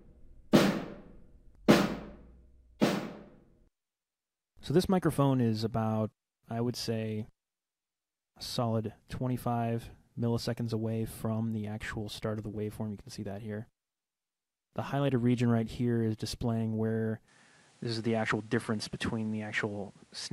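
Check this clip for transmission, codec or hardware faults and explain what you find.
One fault, near the end. From 17.28 s the input switched to a poorer device, likely. Nothing above 11.4 kHz survives, so it dulls abruptly, with a faint new noise floor underneath but no gap or level jump.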